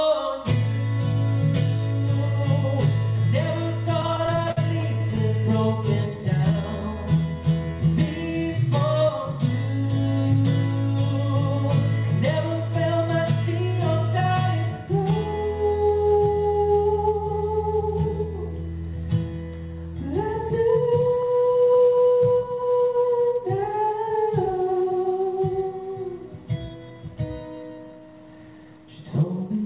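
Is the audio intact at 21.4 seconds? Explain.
No. From 20.94 to 22.99 s the audio shows repeated stalls (stutter): the jitter buffer kept running dry, and each of 27 short waits, none over 16 ms, was bridged by extending the last sound. Nothing drops out, but the audio drags and stutters. A waveform shows repeated, copied cycles, and a spectrogram shows brief smeared, frozen slivers.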